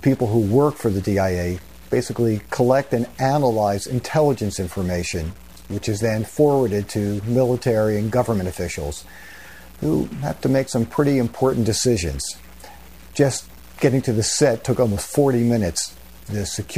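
From start to finish the audio carries a harsh, buzzy distortion that sits on top of the louder passages and does not go away in the quieter ones, where a steady noise floor fills what should be near-silence. This points to a stuck bit, likely one data line held at a fixed value, so about half the samples are offset by a step of roughly -40 dBFS in a waveform-dependent pattern.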